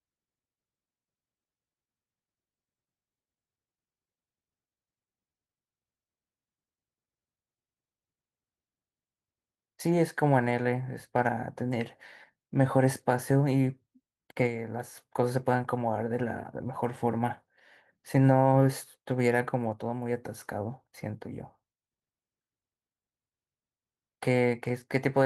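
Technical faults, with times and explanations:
No technical faults found; the speech is carried by Opus voice compression at 24 kbps in hybrid fullband mode with 20 ms frames, and the coding leaves only a light mark.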